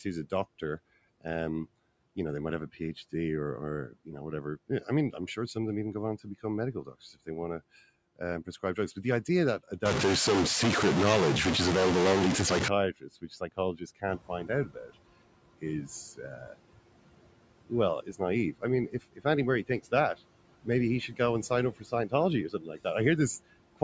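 Right from the start, noise suppressor artifacts are there: the background gets pulled down by about 18 dB, sinking between the words and rising under them.

From 4.68 to 7.28 s, between "you know whatever" and "want to", the suppressor mistakes some speech for noise, cutting it by up to about 14 dB. Around a third of a second of speech comes out swallowed.

Right after "but the idea that", from 9.86 to 12.68 s, a distortion sits on the sound and the gaps fill with hiss. The likely cause is a stuck data bit shifting roughly half the sample values.

More speech gets cut by the noise suppressor at 13.0–14.91 s (up to about 19 dB, roughly 0.7 s in total), 15.61–16.55 s (about 15 dB), 17.65–19.92 s (about 18 dB) and 20.64–22.86 s (about 17 dB, around half a second). Near 14 s the room noise jumps about 12 dB.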